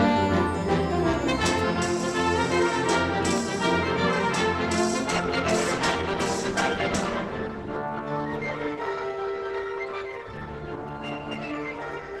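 At 5.11 s an adaptive stream at a lower bitrate takes over to the end: artefacts rise without a gap, consistent with Opus falling from 64 to 16 kbit/s.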